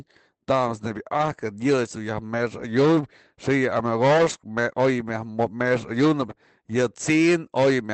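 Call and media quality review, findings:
Lost packet rebuilt from error correction, 1.17–1.39 s and 4.17–4.35 s: brief rough, noisier patches of about 120 ms and 100 ms, with no gap or dropout. Likely Opus in-band FEC on the receive side, with the decoder playing low-bitrate copies carried in the following packets. Lengths fit runs of about six and five 20 ms packets. Unlike plain concealment, there's no smeared repetition or fade. The sound stays continuous, just coarser, over the Opus path with audio up to 8 kHz.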